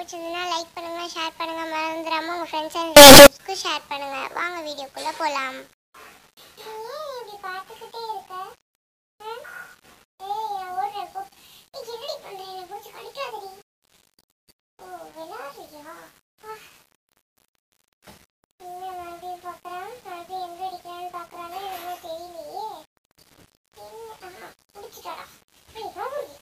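From 2.97 to 3.27 s, the 8-bit samples were likely read with the wrong sign convention, signed taken as unsigned or the reverse, so the top bit of every sample flips. Each zero crossing then becomes a leap from one extreme of the range to the other. For those 0.3 s the sound turns into a very loud, harsh, buzzing distortion, with quiet moments blasting as hard as loud ones.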